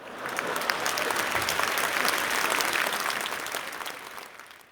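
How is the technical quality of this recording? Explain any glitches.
The recording's technical quality is good, with no glitches to explain.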